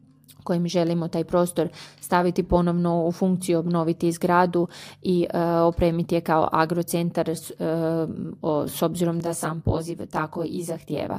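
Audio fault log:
9.20 to 11.19 s, channel delay (comb filtering): the sound turns rough and slightly doubled through to the end because one channel arrives roughly 20 ms late. Summing to mono cancels evenly spaced frequencies, leaving fixed notches from around 30 Hz upward.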